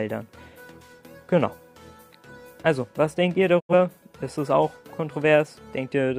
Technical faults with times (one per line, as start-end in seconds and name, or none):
3.59-3.73 digital broadcast dropout